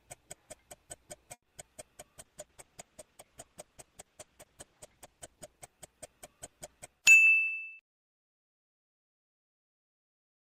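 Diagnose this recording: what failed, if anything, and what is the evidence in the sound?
A short stall from a late packet sits at the network and jitter-buffer stage, from 1.33 to 1.44 s. The last sound is held for about 90 ms and then resumes exactly where it left off. Nothing is lost, which separates it from true packet loss.

A short concealed packet loss follows at 1.50 to 1.53 s. About 20 ms of audio never arrived, and the decoder extrapolated the preceding sound to bridge the gap. The result is a brief smear rather than a held tone, and unlike the stall, material is missing.

A call bitrate drop is a codec change driven by the network's bandwidth estimate. From 2.2 to 8.2 s the encoder falls from 96 to 11 kbps and stays lowest for about 2.8 s. The sound turns coarse and muffled as the highs are cut. It is a sustained change rather than a momentary glitch.

A jitter buffer speed-up runs from 7.00 to 7.47 s, inside the low-bitrate stretch. 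To shed excess buffered delay, the receiver trimmed roughly a tenth of a second in pitch-period slices, and playback runs at about 116% speed. The pitch stays the same, so this is time compression, not a resampling error.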